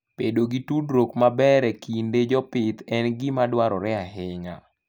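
A speech recording that turns dull and muffled from 1.23 s, just after "gi tudruok", until 4.72 s, its treble rolling off smoothly to about 8 dB down at 10 kHz relative to 1 kHz. This is de-emphasis applied wrongly: a treble-cutting correction filter was applied to speech carrying no matching pre-emphasis.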